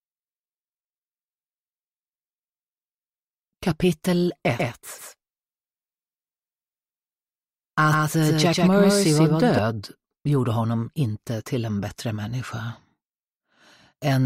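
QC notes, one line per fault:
4.59–9.59 s, doubled audio track: a second full-band copy of the sound runs behind the original by around 150 ms and a few decibels quieter, giving a smeared, stuttering slapback on every onset. The copy has no decay or room colour and cuts in and out abruptly at both ends, so it is not reverberation. The likely cause is the signal being captured twice, once through a slower path, or an edit holding two unaligned copies.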